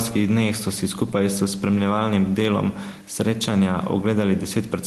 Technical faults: gain pumping

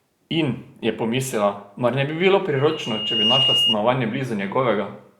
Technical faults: loudspeaker feedback squeal

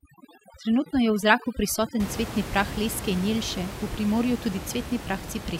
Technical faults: overdone noise removal

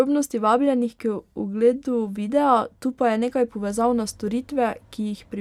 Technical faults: none

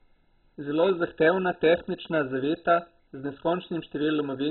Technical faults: MP2 compression

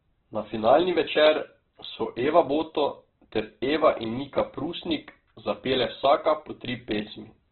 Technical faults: Opus compression

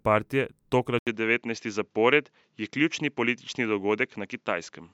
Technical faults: input switched to a poorer device

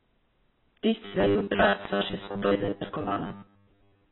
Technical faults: AAC compression; robotic sound from repeated short buffers

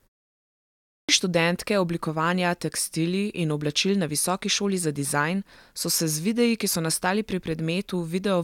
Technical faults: clipped start after a pause

